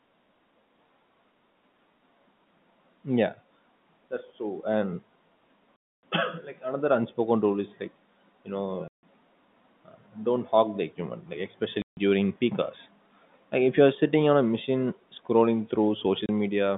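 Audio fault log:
5.76–6.03 s, 8.88–9.03 s (after "is like you know"), 11.82–11.97 s (after "the equipment like"), 16.26–16.29 s (after "on a machine scrolling"): packet loss filled with silence. Missing packets were replaced by dead air, cutting gaps of 270, 150, 150 and 30 ms, all consistent with 30 ms packets, with abrupt edges in the narrowband telephone sound.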